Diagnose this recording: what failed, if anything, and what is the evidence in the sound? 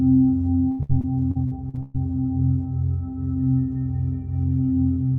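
Choppy stuttering runs from 0.71 s to 1.97 s. The sound breaks up into about eight short holes, the longest about 112 ms, and each hole is bridged by a smeared repeat of what came just before. Around a third of that stretch is patched-in sound rather than the original. This is repeated packet loss (robotic sound) at the network stage. Packets kept arriving late or not at all, and the receiver's concealment stretched the last good audio over each hole before the next loss arrived.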